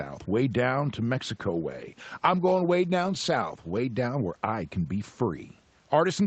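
At 1.26 s, right after "way down to", a call bitrate drop sets in and lasts until 4.45 s, just before "can be". The call's bandwidth estimate fell and the Opus encoder was given far fewer bits. The speech becomes more coarsely coded, at its lowest bitrate for 2.36 s, consistent with a cut from 32 kbps to about 18 kbps, then returns to its earlier quality before the clip ends. Room noise sits about 40 dB below the speech throughout.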